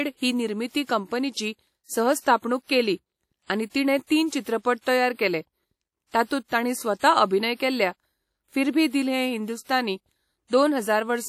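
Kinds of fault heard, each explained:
WMA compression: The speech sounds ringing and washy, with a hiss that rises and falls with the voice. Nothing reaches above 17 kHz. The likely cause is a transform codec spreading coarse quantisation noise over long blocks, fitting an early WMA encoder near 48 kbps.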